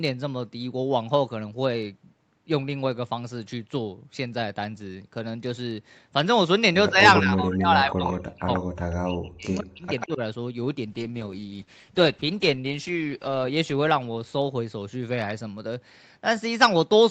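From 6.9 to 7.04 s the speech dips by about 10 dB, then from 7.21 to 9.85 s it is pulled down in pieces, as deep as about 40 dB, and again by about 10 dB at 10.06–10.21 s. This is likely speech suppressed in double talk: the canceller ducks its own talker along with the loudspeaker echo while the far side plays. On a waveform, the envelope caves in. On a spectrogram, the harmonics fade or gap out.

Inside that stretch, at 7.91–8.13, 8.39–8.6, 9.55–9.61 and 9.99–10.07 s, copies of the voice trail it by 139 ms, at about 10, 15, 25 and 10 dB below the speech. This is likely echo leak: loudspeaker sound the canceller missed was sent back. A spectrogram shows duplicated harmonic traces offset 139 ms to the right.

From 10.87 to 15.85 s a call bitrate drop takes Opus from 48 down to 10 kbps, holding the lowest rate for about 2.4 s. The sound turns rough and watery, and the top end is cut back. 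On a spectrogram, the band below the normal 8 kHz ceiling shrinks and turns blotchy, then widens again as the rate recovers.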